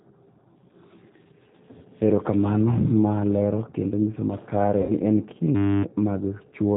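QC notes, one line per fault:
throughout: G.729 codec. The whole clip has that band-limited, slightly rough and synthetic speech sound, with nothing above 4 kHz. It's the model-based rebuild of the voice from filter, pitch and sparse pulses, and the damage is plainly audible, which fits an 8 kbit/s G.729A link.
4.81 to 4.93 s: VoIP packet loss concealed by the speech codec. About 80 ms of audio went missing, which fits four lost packets. The decoder stretched its last pitch and filter into a buzzy tone or coloured noise that fades, and the voice stays weak for a moment after because each frame leans on the previous one.
5.55 to 5.83 s: system hang loop. A 10 ms slice of audio repeats 28 times, so you hear a steady buzz at 100 Hz instead of speech. The system stalled while the hardware kept replaying the same buffer, and roughly a third of a second of real audio is gone.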